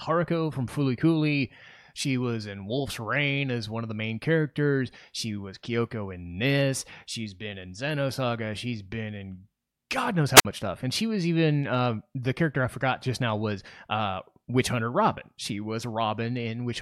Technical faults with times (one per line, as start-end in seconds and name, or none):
10.35-10.45 wireless microphone squelch dropout